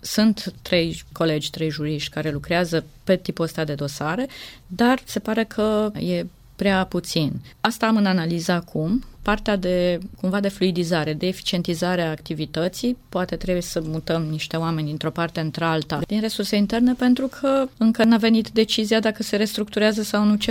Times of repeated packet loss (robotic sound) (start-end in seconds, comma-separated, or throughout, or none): none